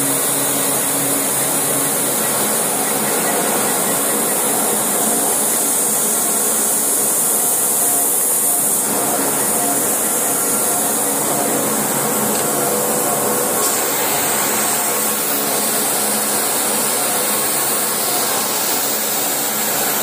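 No technical faults are audible anywhere in the audio.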